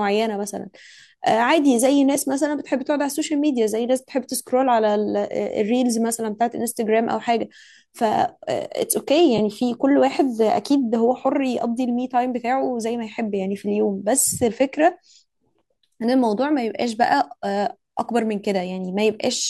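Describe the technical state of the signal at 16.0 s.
At 16.0 s the speech is intact, with only the light, steady coloration of what is likely low-delay AAC compression and no fault at that moment.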